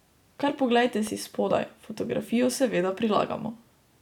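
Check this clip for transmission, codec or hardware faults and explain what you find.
One hardware fault is present. From 1.07 to 1.09 s there is a loud pop, a single sharp thump peaking several decibels above the speech, which continues underneath. It is likely caused by a sudden voltage pulse from a plug, switch or static discharge entering the signal chain.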